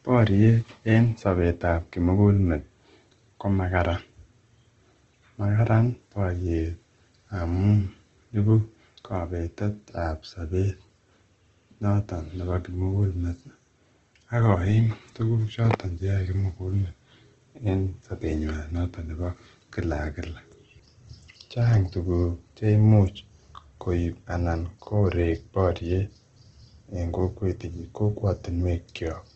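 A speech recording that sounds grainy and rough throughout, with a noisy texture on tonal parts and nothing above about 8.3 kHz. The likely cause is Opus compression in its music-style mode, with the narrowed wideband bandwidth fitting a low bitrate near 16 kbps.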